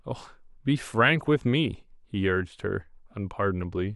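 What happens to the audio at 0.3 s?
Nothing goes wrong at 0.3 s; the speech continues intact through that moment.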